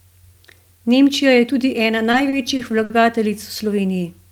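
Right after "je tudi ena", from 2.11 to 2.92 s, the speech falls into repeated stalls (stutter). Packets arrived late or too slowly, and the jitter buffer ran dry four times. Each time, the receiver stretched the last sound to fill the wait. The longest hold lasts about 60 ms. Together the holds fill 140 ms, roughly a sixth of that stretch. Nothing is lost. The speech just drags and hiccups through the span.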